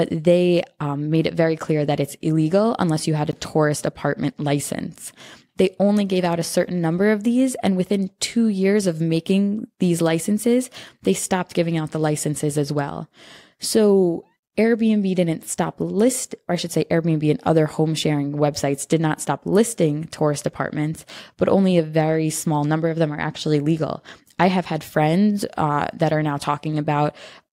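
At 3.31 s, right after "unless you had a", the speech drops to dead silence for about 15 ms and then resumes with "a tourist apartment license", as if the audio briefly froze. This is most likely a Bluetooth stall: radio interference delayed packets on the wireless link, the receiving buffer emptied, and playback halted for that instant until the retransmitted data arrived, leaving a tiny gap.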